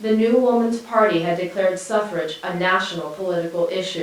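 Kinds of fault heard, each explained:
No fault of any kind can be heard in this speech recording. There is nothing in the audio that calls for a line of its own.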